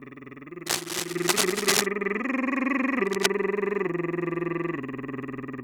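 Dense, uneven scratching and rustling covers the music from 0.66 to 1.86 s and again from 3.06 to 3.30 s, about as loud as the music itself. This cable scratch noise likely comes from a worn cable or connector whose contact resistance fluctuated rapidly while being moved.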